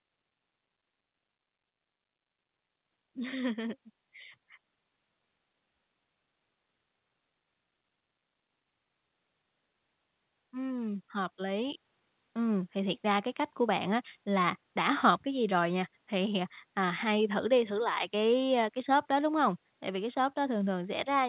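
Automatic gain rising at 3.0 to 3.8 s and again at 10.5 to 11.86 s in this speech clip: the gain control judged the input too quiet and pushed its gain up gradually, by about 3 dB in the first swell and about 6 dB in the second. Voice and background grow louder together, with the narrow, 4 kHz-limited sound of a G.711-style call path.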